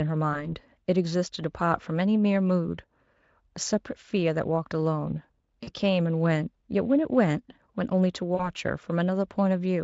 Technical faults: VoIP packet loss concealed by the speech codec

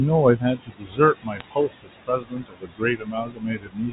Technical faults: noise suppressor artifacts; speech cut by the noise suppressor; bit errors on a digital phone line

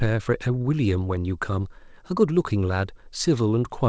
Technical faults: none

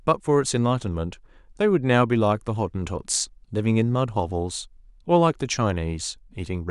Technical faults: none

